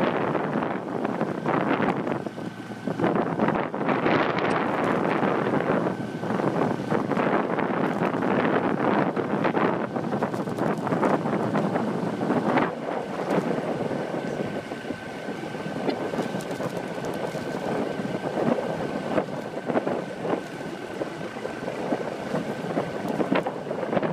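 At 4.48 to 4.53 s, 15.87 to 15.92 s and 20.91 to 20.96 s there's damaged data in the compressed stream: the decoder loses sync and spits out a brief garbled blip each time.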